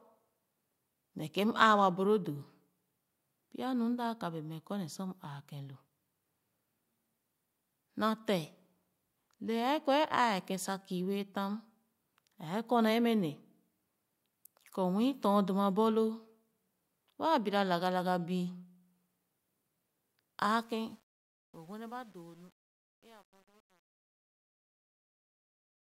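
From 20.47 s to the end at 25.92 s, the fade-out suffers truncation distortion on a fade. The volume stage drops low-order bits without dither, leaving a word length that fits about 9 bits. As the speech falls toward the smallest step, it is forced into coarse square stairs. From 20.97 s onward the tail turns gritty and buzzy, rather than thinning out cleanly.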